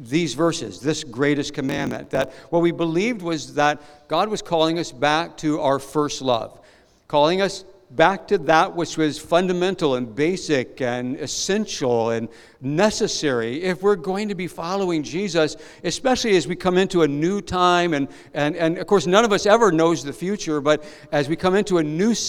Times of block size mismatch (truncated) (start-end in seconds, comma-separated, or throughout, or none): 1.67-2.43